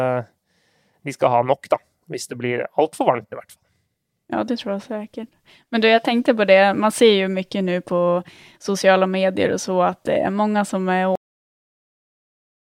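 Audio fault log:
11.15 s to end: cut-off end. Just after "mange som er" the speech stops mid-sound and falls straight to digital silence for the final 1.6 s, with no decay. The last stretch of audio was never written out, so nothing remains to fade.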